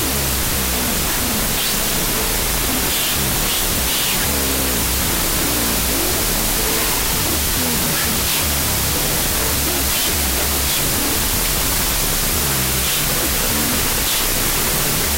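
The whole clip has a wrong sample width problem. You hear a wall of loud, harsh noise with the actual audio buried underneath, running at half speed, so everything sits an octave low. That pattern points to 32-bit float data being read back as 16-bit integers. Each real sample gets split into two bogus values, which doubles the sample count and halves the speed. Most of those values are just float bytes misread as integers, hence the noise.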